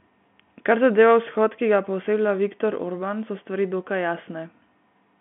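Nothing stood out on listening to this telephone-band speech.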